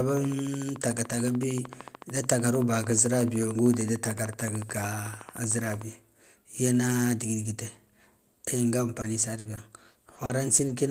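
Right from 0.09 s through to 5.82 s there's a train of clicks ticking away under the speech, evenly spaced at about 13.5 per second, so around seventy in all. They poke out a few dB above the speech and carry on through the pauses, each one the same sharp little tick. A steady rhythm like that is most likely interference from nearby equipment or a faulty connection or power supply.

From 9.01 s to 10.71 s it turns choppy and robotic, the classic sound of repeated packet loss. There are what sound like seven separate dropouts, the longest about 60 ms, adding up to around 220 ms of missing audio. Each gap gets papered over by stretching the last bit of sound forward, so about 13 percent of that stretch is filler rather than real speech, which gives it that stuttering edge.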